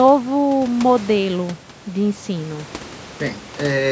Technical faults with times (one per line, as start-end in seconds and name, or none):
none